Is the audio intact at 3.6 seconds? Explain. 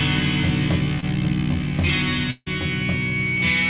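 Yes, the audio is intact at 3.6 seconds: nothing breaks or drops out there, and what is heard is simply the call path's narrowband sound, with nothing above 4 kHz, consistent with a G.711 A-law link at 64 kbps.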